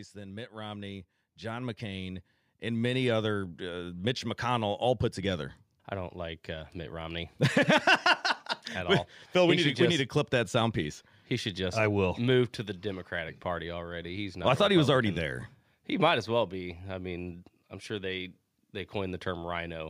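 From 0.12 s to 4.37 s the level climbs steadily by about 12 dB, settling just before "all put together I". This is automatic gain rising: the gain control judged the incoming speech too quiet and raised its amplification slowly over those four seconds. The background noise swells in step with the voice, which separates it from a talker simply speaking up, where the noise floor would stay put while only the voice grew louder.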